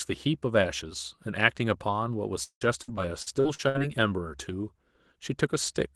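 From 2.43 to 3.82 s the speech turns choppy and robotic, with pieces missing: repeated packet loss, eight gaps up to 174 ms long. Each hole is patched by extending the preceding sound, so roughly a third of that stretch is synthetic filler, heard through a call codec band-limited to about 12 kHz.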